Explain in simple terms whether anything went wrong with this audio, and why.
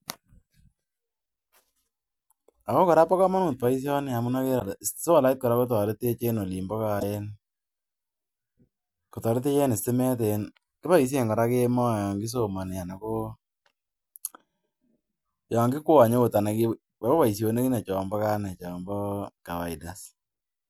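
Two tiny glitches break into the speech, from 4.59 to 4.61 s and from 6.99 to 7.03 s, each a quick blip where the sound skips ahead. That's likely a broken MP3 bit reservoir: a chunk went missing, so the next one borrowed the wrong data.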